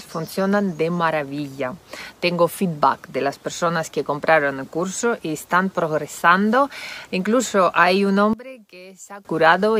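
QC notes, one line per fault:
8.33 to 9.25 s: one channel inverted, likely. When summed to mono the centred content drops by about 20 dB, leaving only a faint difference signal.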